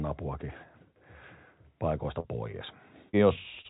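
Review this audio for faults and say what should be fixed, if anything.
Short concealed packet loss at 2.20 to 2.27 s and 3.09 to 3.16 s: about 40 ms of speech never arrived each time, so the receiver extended the preceding sound for roughly 40 ms and crossfaded back. Each gap sounds like a brief smear or wobble.

Short stall from a late packet at 3.61 to 3.67 s: the jitter buffer ran dry, and the receiver held the last sound for about 34 ms until the packet arrived. Nothing is lost, but that moment lingers with a slight buzz or dip, and the delay grows by 34 ms.

The narrowband sound, with nothing above 4 kHz, fits a 64 kbps G.711 mu-law call. To prevent the gaps and the stall, fix the network path's loss and jitter, or give the jitter buffer more headroom.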